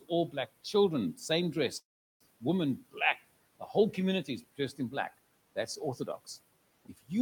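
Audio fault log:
1.79–2.22 s, call audio freeze: After "black children same dress" the audio stops for about 0.43 s. A brief tail continues the last sound, then it goes silent for most of the gap. This is likely a jitter buffer running dry while packets were held up. Speech then resumes where it stopped, nothing lost, only delayed.
2.78–2.96 s and 6.85–7.11 s, speech cut by the noise suppressor: Parts of the speech dip sharply, by about 16 dB and about 13 dB, for roughly a tenth of a second each. The suppressor mistook them for noise, so they sound swallowed. The first comes just before "the whole community is", over a room noise floor about 23 dB below the speech.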